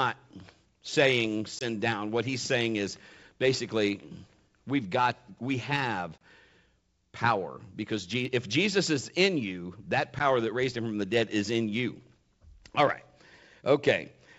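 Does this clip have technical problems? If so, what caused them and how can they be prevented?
Yes. Packet loss on an ADPCM call causes three short dropouts: 1.59 to 1.65 s, 6.18 to 6.21 s just after "we've got we have", and 10.19 to 10.22 s between "is in you that" and "that raised". The lost stretches last about 20, 30 and 10 ms, roughly a packet or three each. Missing audio was filled with silence, and with the lost packets the decoder's adaptive predictor and step size drifted from the sender's. Speech resumes slightly distorted before settling. On a waveform each appears as a flat, hard-edged gap. On a spectrogram it is a thin vertical blank band. The sound is wideband up to 7 kHz, consistent with 64 kbit/s G.722. Packet loss concealment that resets or re-syncs the ADPCM state, plus a jitter buffer and network prioritisation, would prevent these holes.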